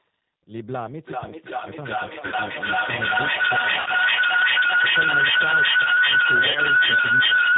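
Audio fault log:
throughout: G.729 codec. The speech sounds narrow, slightly rough and synthetic, with plainly audible coarseness. It is the G.729 family at 8 kbit/s. Each 10 ms frame is rebuilt from a vocal tract filter, a pitch predictor and a handful of pulses, so the fine texture of the waveform is lost. Nothing above 4 kHz survives.
2.26–2.35 s, 3.80–3.88 s, 6.51–6.60 s: VoIP packet loss concealed by the speech codec. At each point the sound turns into a short buzzy tone or coloured noise that fades, then stays weak and distorted briefly before normal speech resumes. The decoder was missing audio, about 60 ms at the first two and 40 ms at the third, which fits runs of 20 ms packets. It filled each gap by extending its last pitch and filter at falling gain. Because each frame depends on the one before, the damage outlasts the gap.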